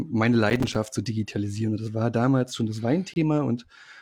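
A speech recording with two separate timing faults. From 0.5 to 0.93 s, just before "zu digitalisieren", the processor falls behind and keeps missing its deadlines for short audio buffers, which sounds like buffers of about 5 ms, with something like fifteen missed in that stretch. Each miss drops in a brief hole of silence with abrupt edges. Packed this closely, the holes merge into a burst of processor overload crackle, a gritty tearing over the voice that stops once the load eases. At 3.14 to 3.16 s, right after "war damals schon das", there is a gap between stream segments: the timestamps of two consecutive segments, which appear to be 2 s long, leave a small space that the player fills with silence. The result is a clean, hard-edged dropout of about 25 ms that briefly interrupts the speech without removing any of it.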